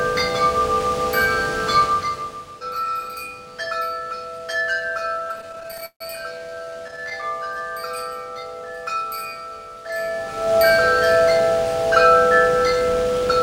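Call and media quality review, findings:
Repeated stalls (stutter), 5.19–6.02 s and 6.38–7.24 s: jitter buffer ran dry; receiver concealment stretched the last sound through 19 gaps per span (330 ms, then 218 ms filled), with nothing lost but the audio dragging.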